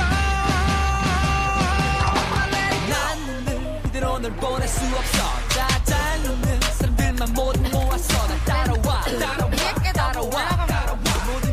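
From 1.03 s to 9.51 s, regular clicks recur every 2.83 s. These are likely clock drift buffer slips, with a few dozen samples dropped or repeated each time.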